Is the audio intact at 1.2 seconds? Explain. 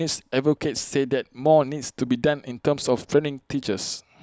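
Yes, at 1.2 seconds the speech plays through intact, with no audible dropout, click, distortion or other fault at that moment.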